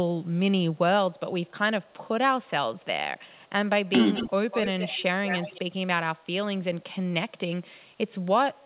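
At 3.33 to 3.49 s a very faint delayed copy of the speech appears, about 266 ms behind. From 4.14 to 4.31 s, 4.51 to 5.03 s and 5.27 to 5.60 s an echo leak returns much louder, only about 5 to 10 dB below the speech, about 202 ms late. It is likely a far-end echo canceller letting loudspeaker pickup through. On a spectrogram, the speech's harmonic bands repeat shifted right in time. The waveform shows overlapping duplicated bursts, and on the spectrogram everything is capped at 4 kHz by the narrowband call path.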